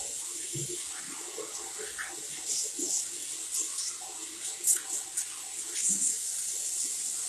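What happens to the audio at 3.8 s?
At 3.8 s the sound carries the same HE-AAC compression damage heard throughout the clip, plainly audible, and the grainy, metallic treble points to a very low bitrate near 16 kbps. Nothing reaches above 12.3 kHz. The upper band is likely rebuilt by spectral band replication, copied up from lower frequencies rather than coded, so its harmonics fail to line up. On a spectrogram the top shows smeared, repeated patches ending in a hard ceiling at 12.3 kHz.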